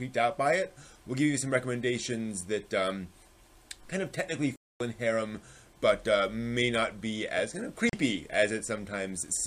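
At 4.56 s the sound cuts to silence for about 0.24 s, then again at 7.89 s for roughly 40 ms. Both gaps are likely a Bluetooth dropout: packets missed their deadline, the output went quiet, and playback picked up further along as if it had never paused.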